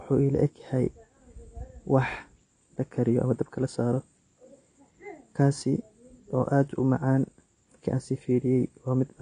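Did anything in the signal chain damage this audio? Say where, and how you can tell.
Yes, the codec stage. Throughout the speech nothing sounds above 9.5 kHz, and sibilants fizz and warble. That points to AAC compression, likely AAC-LC at a bitrate around 32 kbps, discarding and coarsely quantising bands. A plain low-pass filter would dull the sound without this swirling texture.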